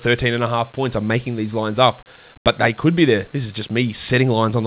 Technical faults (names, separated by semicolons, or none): none